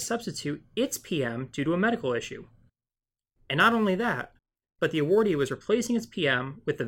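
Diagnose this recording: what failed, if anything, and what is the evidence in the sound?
Crude rate conversion runs from 3.60 to 5.53 s, a fault at the sample-rate conversion stage. Through that stretch the speech carries a gritty, inharmonic fizz, roughly 30 dB below the signal, that rises with louder and brighter syllables. The converter picked the nearest sample instead of filtering, dropping samples on a fixed cycle. The error pattern fits a 48 kHz to 44.1 kHz conversion and produces tones unrelated to the voice.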